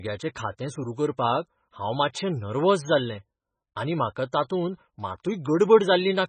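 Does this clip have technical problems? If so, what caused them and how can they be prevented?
Yes. Heavy MP3 compression is the likely cause throughout the speech. The bit budget is so tight that it fits a bitrate around 17 kbps, so the encoder has removed everything above 9 kHz and keeps switching weak frequency lines on and off between frames. The result is a dull, watery, swirling sound with smeared onsets. Encoding at a much higher bitrate, or keeping a lossless copy, would prevent this.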